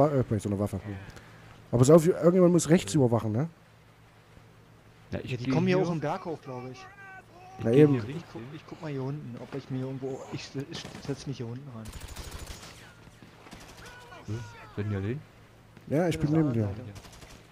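No technical faults are audible.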